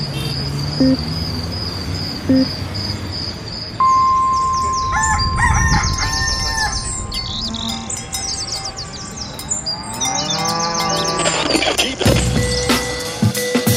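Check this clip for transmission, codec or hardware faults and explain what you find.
Checking this clip turns up no faults to explain.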